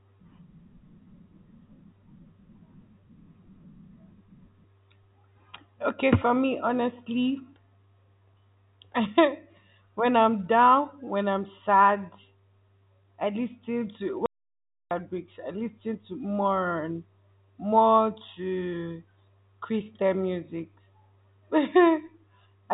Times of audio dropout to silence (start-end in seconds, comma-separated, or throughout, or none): 14.26-14.91